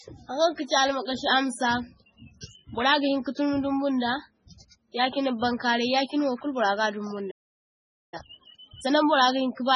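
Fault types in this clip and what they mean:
MP3 compression: The whole clip sounds watery and swirly, and the speech has a smeary, metallic edge on the sibilants. That points to a very low bitrate, something like 16 kbps, with the damage likely from MP3 encoding. When the encoder runs short of bits it chops the treble at a fixed point and drops quieter frequency lines, which flicker in and out from frame to frame and cause the swirl.
Playback stall: At 7.30 s the speech just stops dead, and nothing plays for roughly 0.82 s until 8.14 s. It's a clean gap in the middle of the flow rather than a fade, which is what you get when the player can't deliver audio for a moment, likely because it ran dry of data or its thread got held up.
Time-compressed catch-up: Right after the gap, from 8.14 to 8.94 s, the speech comes out at twice normal speed while staying at its normal pitch, so it sounds rushed rather than chipmunky. 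The player is eating through the backlog that built up during the stall by cutting out small slices and cross-fading the remaining pieces together until playback settles back to normal pace.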